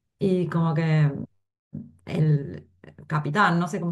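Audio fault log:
0.15–3.89 s: clock slip clicks, faint ticks about every half second, around seven of them; likely two unsynced clocks roughly 40 ppm apart, dropping or repeating a sample each time.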